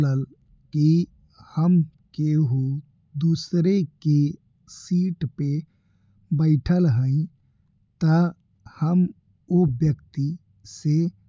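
Nothing goes wrong on the technical side anywhere in this stretch of speech, so there's no fault to point to at any moment.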